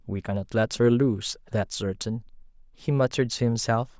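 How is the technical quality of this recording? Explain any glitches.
Nothing here sounds like a glitch; the speech comes across without any dropouts, clicks or other technical hiccups to point to.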